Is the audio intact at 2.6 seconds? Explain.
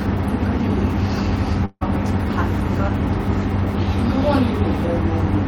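Yes, the speech at 2.6 s plays through cleanly, with no dropout, click, distortion or other fault at that moment.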